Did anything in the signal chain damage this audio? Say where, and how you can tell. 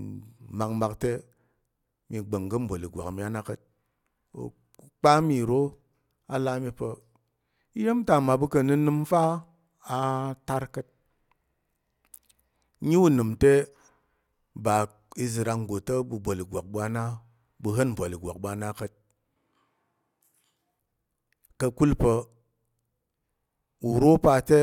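Yes. After "na ka̱t", from 19.36 to 20.79 s, speech turns abruptly hollow and roomy with thinner bass at a similar level. This is likely a switch to a distant microphone at capture. A spectrogram shows weakened lows, smeared reverberant tails, and a higher noise floor roughly 35 dB below the speech.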